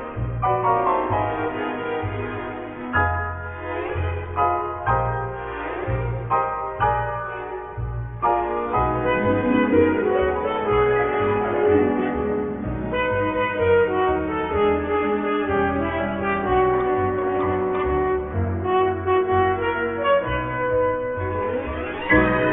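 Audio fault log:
No faults found anywhere in the clip; nothing to log.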